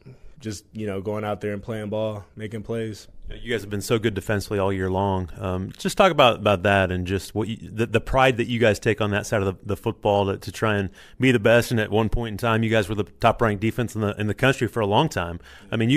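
No technical faults can be heard anywhere in the recording.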